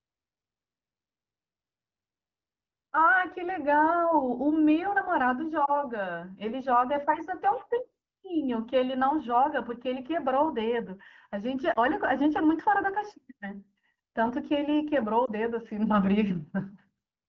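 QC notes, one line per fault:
5.66–5.75 s, 11.73–11.78 s and 15.26–15.30 s, lost AMR speech frames: each time, radio errors corrupted a single 20 ms frame, which failed its checksum. The AMR wideband decoder filled the gap by reusing the last good pitch and vocal tract settings at reduced gain. Because only one frame is missing at a time, the result is a brief dip or warble, followed by a moment of weak or rough speech as normal decoding resumes.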